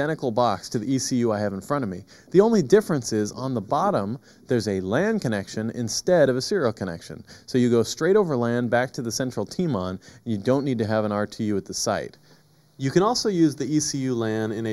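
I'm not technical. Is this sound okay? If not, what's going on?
No. Channel delay (comb filtering) runs through the whole clip. One side arrives about a fifth of a millisecond late, so when both sides combine, parts of the sound cancel, first around 3 kHz and again at evenly spaced points higher up. The result sounds hollow and phasey.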